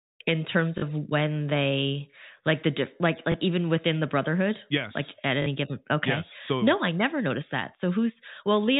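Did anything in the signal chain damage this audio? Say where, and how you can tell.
Yes, in the network stage. Short robotic stutters occur at 0.78 to 0.82 s and 5.42 to 5.46 s, and a small blip at 3.32 to 3.34 s, the first and last lasting 40 ms and the middle one 20 ms. This is packet loss with the last packet repeated. The receiver replayed the previous chunk to fill each gap, and the 20 ms steps fit one lost 20 ms packet at 3.32 s and two at each of the others. The G.711 telephone coding holds everything under 4 kHz.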